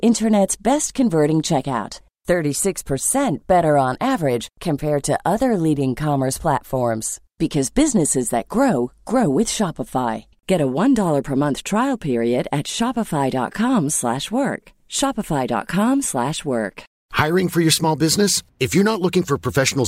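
No technical faults can be heard anywhere in this recorded speech. Nothing breaks into or disturbs the sound at any point.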